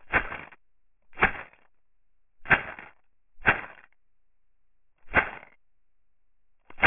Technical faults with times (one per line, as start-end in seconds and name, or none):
0.00-6.87 aliasing